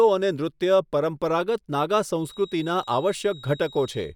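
From 2.16 s to the end, a feedback whistle sits at 3.8 kHz, roughly 25 dB below the speech, swelling and fading slowly; likely a loudspeaker-to-microphone loop held just short of runaway.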